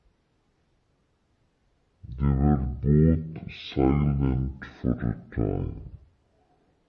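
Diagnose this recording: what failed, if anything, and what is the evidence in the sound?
Playback failed with a wrong sample rate: throughout, the speech runs at half speed and sits a full octave (12 semitones) low, which fits 48 kHz audio clocked out at 24 kHz. Because pitch and tempo drop together, this is not a pitch shifter or time-stretch.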